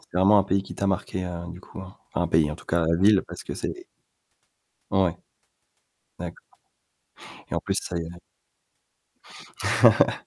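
Speech recording with no audible technical faults.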